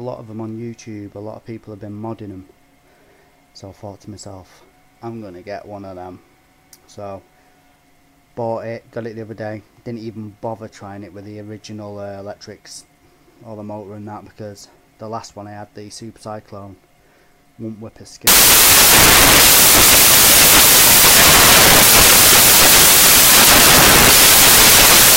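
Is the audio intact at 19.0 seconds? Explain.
No. From 18.27 s to the end, the samples are built from the wrong bytes: the reader misassembles each sample's bytes, so the rapidly changing low-order bits become the dominant part of every value. At 19.0 s this produces loud, harsh broadband noise.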